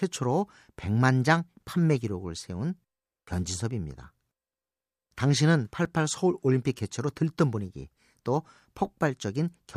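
A block of digital silence at 5.85 s interrupts this speech clip: about 5 ms of sound drops straight to silence and returns with no fade, so the abrupt edges are heard as a single tick. The length fits a 256-sample output buffer left unfilled in time.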